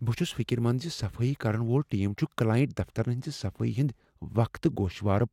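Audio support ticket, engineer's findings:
Engineer's findings: no audio fault found in this speech recording.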